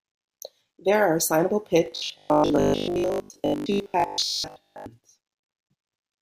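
From 1.86 to 4.86 s the speech goes to robotic sound from repeated short buffers: a rigid metallic 50 Hz buzz, likely from 20 ms chunks looping while most real audio gets skipped.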